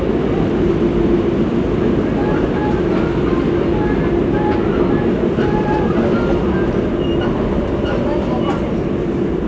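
No technical faults are audible.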